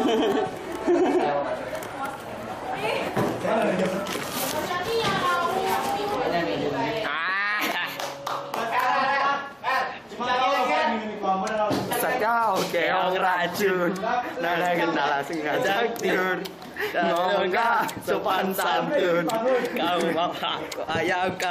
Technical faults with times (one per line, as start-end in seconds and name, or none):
7.58 compressed frames skipped
11.90 compressed frames skipped
16.08 compressed frames skipped